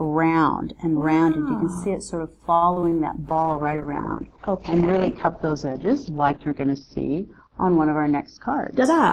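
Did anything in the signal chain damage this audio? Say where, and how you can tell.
Yes. From 2.55 to 2.95 s the sound turns choppy, with four brief holes, the longest about 59 ms, and roughly a third of that stretch smeared over rather than real. This is repeated packet loss (robotic sound) on the network leg. Packets went missing or arrived too late one after another, and the receiver padded each gap by stretching the preceding audio until the next hole arrived.

From 3.30 s to the end the sound becomes dull and rough, losing its top end and gaining a watery, coarse texture. This is a call bitrate drop at the codec stage. The encoder fell from 96 kbps to 8 kbps, and at that rate it quantises far more crudely and caps the audio band near 6 kHz instead of 20 kHz. Nothing recovers before the clip ends.

Between 5.18 and 7.28 s everything sags in pitch by about 94 cents, close to a semitone, and slows by about 5.3%, then springs back at 7.28 s. 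Pitch and speed move together, so the playback rate changed as a whole. The likely cause is a drift correction step in the driver or buffer stage, where clock-matching software abruptly resampled to rebalance its buffer and later restored the normal rate.

From 8.11 to 8.68 s the audio rushes ahead at about 110% speed while its pitch stays put, so it sounds hurried rather than higher. This is a jitter buffer speed-up in the receiver's call processing. Too much audio had built up in the buffer, so the receiver repeatedly cut out short pitch-period slices, around 70 ms in total, to shrink the delay back toward its target.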